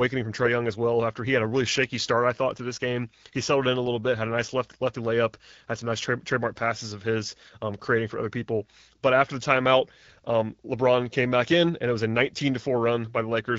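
Nothing stood out on listening to this speech, which is carried by the AMR wideband (HD Voice) codec at 12.65 kbit/s.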